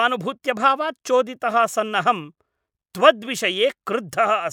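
A short speech recording with no technical fault to report. Nothing in it calls for a time, a value or a cause.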